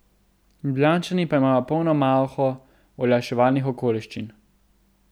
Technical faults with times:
none

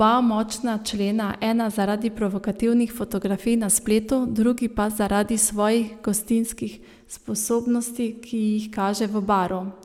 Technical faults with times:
none

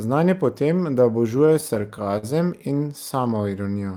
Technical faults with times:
1.37-2.25 repeated stalls (stutter)

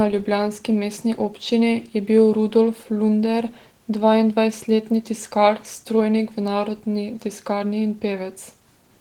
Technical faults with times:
0.00-9.01 Opus voice compression

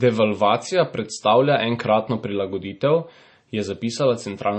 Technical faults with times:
0.00-4.59 MP3 compression

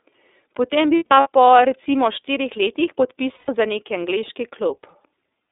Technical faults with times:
0.00-5.52 iLBC codec
0.97-1.27 lost iLBC frames
3.35-3.49 lost iLBC frames

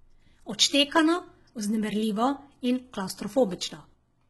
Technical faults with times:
0.00-4.30 HE-AAC compression

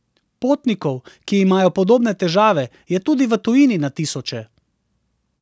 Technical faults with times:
none

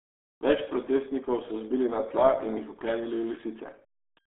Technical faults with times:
0.00-4.28 RealAudio 14.4 codec

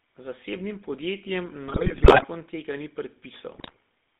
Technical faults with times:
0.00-4.20 GSM full-rate codec
1.68-2.25 GSM bit errors
3.54-3.76 GSM bit errors

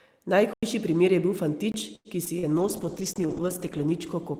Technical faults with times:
0.53-0.63 block of digital silence
1.72-1.74 block of digital silence
1.95-2.08 short stall from a late packet
2.25-2.46 short concealed packet loss
2.59-4.39 call bitrate drop
3.13-3.16 block of digital silence

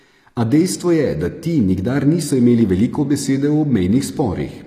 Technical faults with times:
0.00-4.67 HE-AAC compression

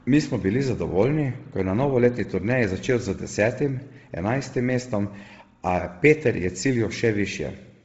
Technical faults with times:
0.00-7.85 Bluetooth LC3 compression

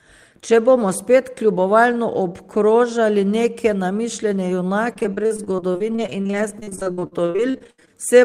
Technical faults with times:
4.93-7.95 repeated packet loss (robotic sound)

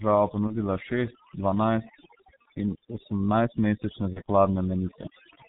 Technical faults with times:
0.00-5.48 overdone noise removal
0.00-5.48 G.723.1 codec
0.47-0.55 VoIP packet loss concealed by the speech codec
2.42-2.45 VoIP packet loss concealed by the speech codec
4.13-4.21 VoIP packet loss concealed by the speech codec

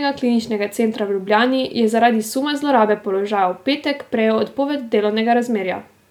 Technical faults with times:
none

